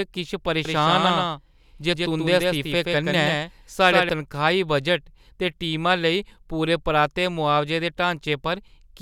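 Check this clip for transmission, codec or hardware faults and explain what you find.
One fault is present: a doubled audio track from 0.65 s to 4.09 s of the speech. A second full-band copy of the signal trails the original by roughly 150 ms at around 5 dB lower, giving a clean, slapback-like repeat with no decay or room colouring. It appears and vanishes abruptly at those boundaries. The likely cause is the same audio arriving twice, once through a slower capture path or from an edit holding two offset copies.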